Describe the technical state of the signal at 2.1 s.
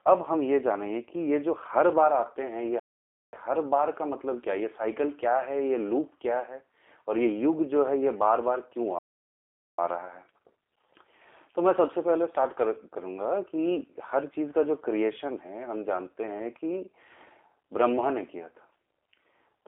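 At 2.1 s, as throughout, the speech carries plainly audible G.729 codec damage. It is rebuilt from a vocal-tract filter and sparse pulses, so it sounds rough and synthetic. The spectrogram is blank above 3.5 kHz.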